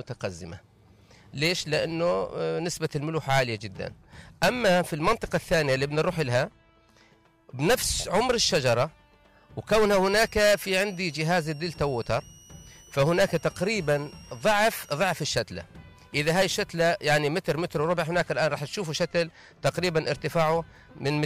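From 10.07 s to 15.23 s, a switching supply whistle sits under the sound. A power supply is switching at an audible rate. It gives a high tone near 3 kHz, wandering between 2.75 and 2.97 kHz. It sits well below the main signal.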